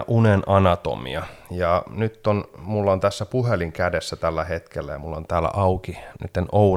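Nothing in this recording stands out as a technical problem, with no dropouts, glitches or other faults showing up anywhere along the way.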